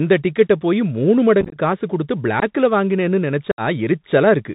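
Throughout, the speech carries the Bluetooth CVSD headset codec. Its one-bit 64 kbps coding removes everything above 4 kHz, roughens sibilants and leaves a granular hiss.

Unconcealed Bluetooth headset packet loss follows. From 1.41 to 1.57 s, after "டிக்கெட்டை போயி மூணு", about 64 ms drops out in scattered gaps, which points to roughly fifteen lost packets, and the speech crackles. At 2.40 s, after "காசு குடுத்து", a short hole of about 19 ms opens. From 3.51 to 3.61 s, about 68 ms goes missing and the sound chops abruptly.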